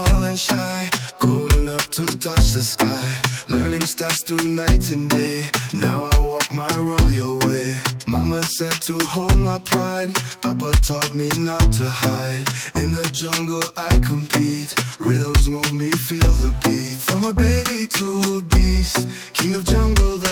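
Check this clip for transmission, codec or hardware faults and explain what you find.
No faults can be heard.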